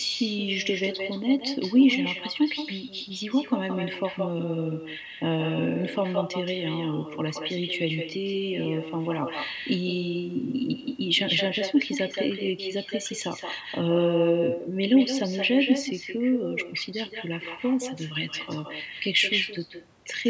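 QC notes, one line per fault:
Throughout: echo with no canceller. Every phrase comes back as a separate, thinner copy, about 8 dB below the speech and roughly 150 ms late, because the far-end loudspeaker feeds its microphone unchecked. Unlike reverb, it's a discrete repeat, not a smooth decaying tail.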